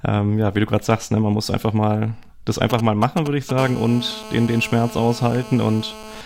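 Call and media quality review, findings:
GSM signalling bursts, 2.70–3.51 s, right after "muss einfach mal das": galloping ticks and short 217 Hz buzz groups, roughly 10 dB under the speech. A nearby 2G handset's signalling bursts are rectified in the audio path. Spectrogram shows clustered vertical stripes; waveform shows spike groups.

GSM phone buzz, 3.58–6.21 s: steady, raspy 217 Hz buzz, about 16 dB below the speech and unrelated to it. The handset is in a call, and the audio circuitry demodulates its transmit pulses. Spectrogram shows a harmonic comb; waveform shows a 4.6 ms pulse train.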